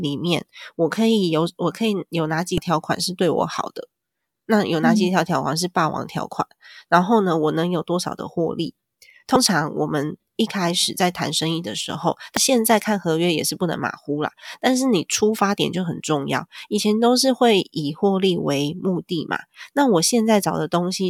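Damaged data in a compressed stream breaks into this speech clip three times: brief blips at 2.58 s and 12.37 s, and a longer disturbance from 9.33 to 9.36 s. At each point part of the encoded stream is corrupted, so the decoder misreads those frames, loses sync and hunts for the next valid frame header.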